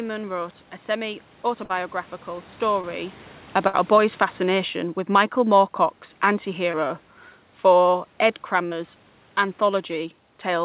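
At 1.64 to 1.71 s a burst of packet loss cuts out about 60 ms of speech. The receiver extends the last sound for roughly 54 ms as a fading buzz or hiss, then jumps ahead with that stretch missing.

A short concealed packet loss follows at 2.81 to 2.85 s. About 20 ms never arrived, and the decoder patched it by continuing the preceding sound before blending back, leaving a brief smear or wobble.

From 3.44 to 6.98 s the automatic gain is falling. The gain control judged the input too loud or its background noise too strong and eased its gain down by about 5 dB, so the speech and its room background sink together. This is separate from the level shift near 3 s, where the talker moved relative to the microphone.

Inside that stretch, another burst of packet loss at 3.67 to 3.75 s removes about 60 ms, all of it filled with a decaying continuation of the prior sound.

Two more short concealed packet losses occur, at 6.71 to 6.75 s (about 20 ms) and at 8.67 to 8.73 s (about 40 ms). 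Each is heard as a momentary wobble where a short sound can drop out, through the G.711 path's band limit at 4 kHz.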